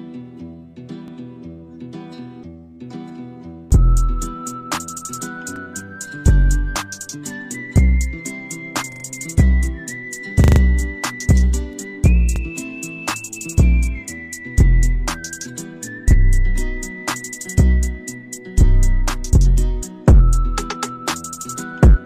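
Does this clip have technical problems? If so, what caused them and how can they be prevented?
Yes. A repeated buffer occurs at 1.08, 5.56, 8.92, 10.44 and 12.36 s. Each time a short slice of sound plays again with a hard join, heard as a brief stutter. It is longest at 8.92 to 9.04 s and 10.44 to 10.6 s, where the slice repeats several times. The repeat length fits a 40 ms buffer, replayed because fresh audio arrived late. Unlike a dropout, there is no silent gap and no audio is skipped. A larger playback buffer or higher audio-thread priority prevents it.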